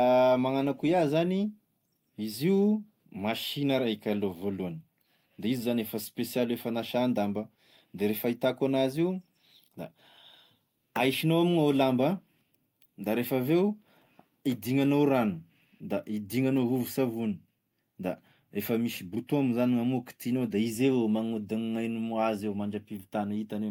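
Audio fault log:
No faults heard anywhere in this speech recording.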